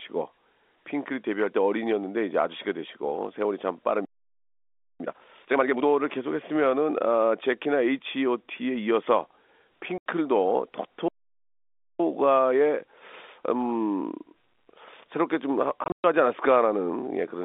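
Twice the player likely starved of data or had its thread blocked. This playback stall leaves the speech, carried over a G.711 A-law telephone line passing roughly 250 Hz to 3.6 kHz, cut off in mid-flow and silent from 4.05 to 5.0 s (about 0.95 s) and again from 11.08 to 12.0 s (about 0.91 s). After each stall the player trimmed its backlog by removing short slices and cross-fading over the joins. This time-compressed catch-up makes the speech run at 2.0 times speed from 5.0 to 5.94 s and at 1.1 times from 12.0 to 15.0 s, hurried but at normal pitch. Packets were also lost in transit, and the receiver played silence in their place. With packet loss filled with silence, an 80 ms hole opens at 9.98 s, which fits four 20 ms packets. Then 160 ms of gaps, the longest 120 ms, chop the stretch from 15.84 to 16.04 s. Each hole begins and ends abruptly.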